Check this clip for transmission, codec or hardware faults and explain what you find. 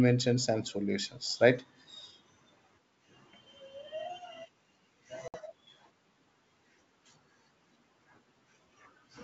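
One transmission fault is present: packet loss on an ADPCM call. From 5.28 to 5.35 s the speech drops into about 60 ms of hard-edged silence, consistent with roughly three lost packets. The decoder's adaptive predictor and step size lose step with the sender's, so speech resumes slightly distorted before settling within tens of milliseconds. The G.722 wideband coding at 64 kbit/s adds at most faint codec damage.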